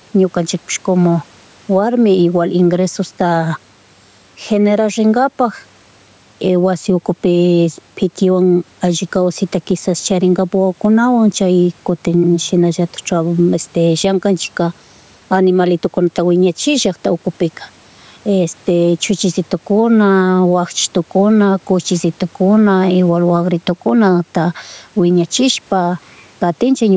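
Gain pumping runs through the whole speech clip, with the level swinging by around 10 dB. The likely cause is microphone gain set far too high, so a fast limiter or compressor clamps down on each loud syllable and releases in the gaps. The room noise sits about 41 dB below the speech, and the speech itself sounds squashed.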